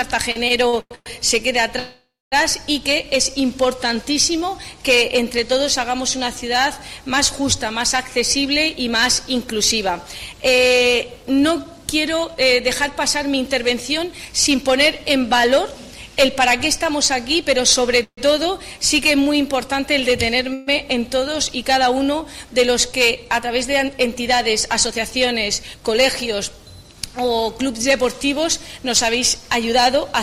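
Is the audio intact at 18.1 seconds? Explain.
No. From 18.03 to 18.19 s there is a call audio freeze, likely from stalled packets draining the jitter buffer. The last sound is stretched into a fading buzz or hiss, then 80 ms of silence, appearing as smeared horizontal bands and a blank gap on a spectrogram. Nothing is lost, but everything after runs 142 ms late.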